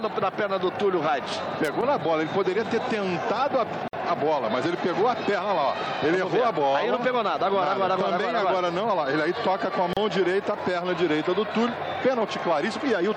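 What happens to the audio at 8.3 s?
Nothing goes wrong at 8.3 s; the audio is intact there, with no dropout, click or other fault.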